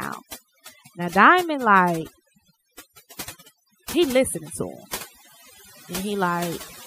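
Overdone noise removal runs through the whole speech: bands near the noise floor are gated away, leaving twinkling specks, seen as isolated dots in a black spectrogram background. From 1.98 to 2.67 s, loose connector crackle appears as a contact repeatedly breaks, producing irregular scratchy crackle that shows as jagged spikes and broadband vertical streaks.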